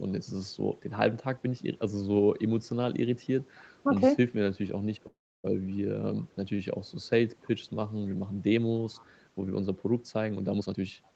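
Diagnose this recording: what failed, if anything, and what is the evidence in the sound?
Call audio freeze, 5.07 to 5.46 s, at the network and jitter-buffer stage. For about 365 ms the sound stalls: the last sound is briefly stretched into a fading buzz that falls to silence for roughly 300 ms, and then the audio resumes exactly where it stopped, with nothing skipped. This pattern likely comes from delayed packets draining the jitter buffer. The receiver concealed the gap, and playback now runs about 365 ms later than before.

Echo leak, 6.18 to 6.26 s and 8.93 to 9.11 s, in the far end's call processing. Two short, very faint scraps of the voice return 276 ms after the original, roughly 40 dB and 35 dB below the direct speech. The most likely cause is a loudspeaker on the other side whose echo canceller let a residue of its own playback pass back through the microphone.

Jitter buffer speed-up, 10.61 to 11.12 s, at the receiver's buffer stage. 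The final half-second runs at about 126% speed with no change in pitch, so the speech sounds hurried. Having built up excess delay, the buffer trimmed small pitch-period-sized pieces in quick succession, removing about 150 ms in total to pull latency back toward its target. The 8 kHz ceiling of the Opus call path is heard throughout the clip.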